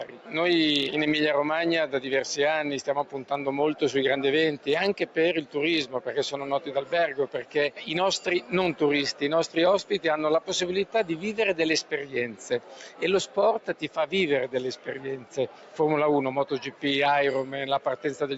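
A noise suppressor built for speech stays active on this sound throughout. It treats sustained material as noise, so the level pumps by about 10 dB. Sound is cut by the noise suppressor at 0.04–0.34 s, 2.89–3.31 s, 4.58–8.53 s, 9.13–9.56 s, 10.4–10.95 s, 11.83–13.98 s and 14.76–15.79 s. In each, held parts and decays sink by up to about 10 dB, while attacks survive.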